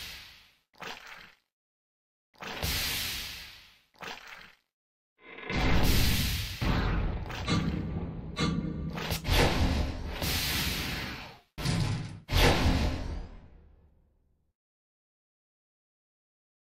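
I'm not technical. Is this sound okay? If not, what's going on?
Yes, nothing here points to a technical problem.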